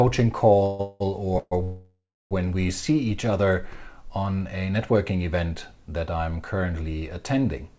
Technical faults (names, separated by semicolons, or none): call audio freeze